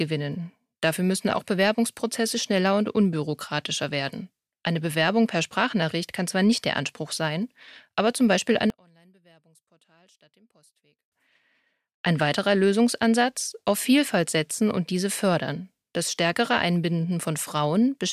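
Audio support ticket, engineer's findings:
Speech nearly vanishes 8.7–11.12 s, level down about 35 dB, leaving a faint residue. One channel inverted, likely a polarity flip in one leg before the mono sum, so the centred voice cancels. Unlike a dropout or mute, a faint remnant persists; unlike a filter, low and high content fall together.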